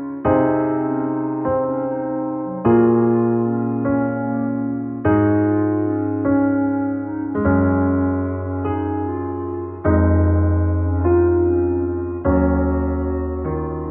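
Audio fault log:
8.26 to 13.9 s, adaptive stream at a lower bitrate: with no gap, the treble turns suddenly thin and synthetic and coding artefacts rise as the player falls back on a slowed connection, which fits a drop from 96 kbit/s AAC to HE-AAC near 12 kbit/s.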